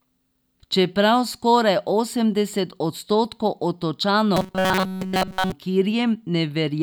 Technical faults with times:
4.37-5.52 robotic sound from repeated short buffers

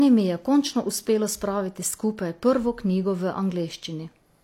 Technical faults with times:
0.00-4.44 low-bitrate audio saved at a high bitrate

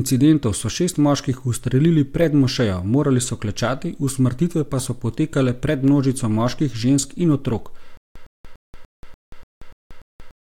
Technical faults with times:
7.97-10.48 stutter with silent gaps

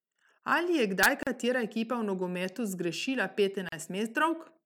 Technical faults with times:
1.23-1.27 gap at a join of encoded pieces
3.69-3.72 gap at a join of encoded pieces

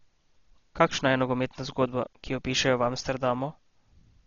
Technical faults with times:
0.00-4.27 Dolby Digital compression

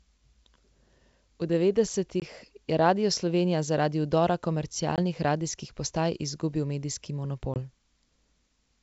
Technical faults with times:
2.20-2.23 packet loss on an ADPCM call
4.96-5.00 packet loss on an ADPCM call
7.54-7.58 packet loss on an ADPCM call

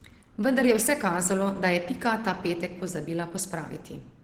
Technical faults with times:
0.00-4.24 Opus compression

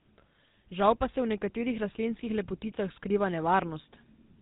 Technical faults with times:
0.00-4.41 GSM full-rate codec

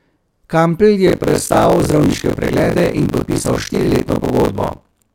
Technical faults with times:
1.06-5.14 buffer tearing

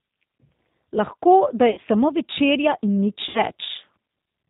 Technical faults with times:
0.00-4.50 G.729 codec
1.71-1.78 VoIP packet loss concealed by the speech codec
3.29-3.40 VoIP packet loss concealed by the speech codec

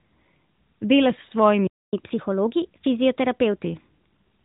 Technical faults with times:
1.67-1.93 playback stall
1.93-3.63 catch-up at higher speed

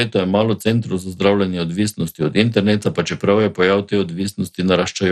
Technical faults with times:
0.00-5.12 MP2 compression

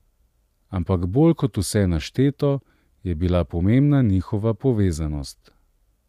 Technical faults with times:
none

